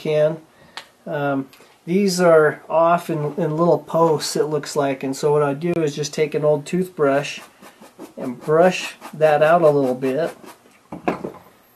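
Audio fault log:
5.74–5.76 s, gap at a join of encoded pieces: the sound drops out for about 25 ms, a short hole with smeared edges, then resumes exactly where it left off, with nothing lost. This points to two separately encoded pieces butted together without trimming, so the padding at the end of the first piece and the encoder's startup delay at the head of the next both remain as silence at the seam.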